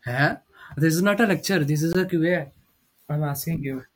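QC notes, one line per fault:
0.32 s, block of digital silence: the speech drops to silence for about 5.3 ms, which fits a 256-sample buffer that was not filled in time. The hard cut in and out gives a tick, seen as a flat line in the waveform and a thin blank column with vertical broadband streaks at both edges on a spectrogram.
1.93 s, block of digital silence: a longer dropout of about 18 ms, heard as a brief hole, seen as a wider empty column bounded by broadband spikes.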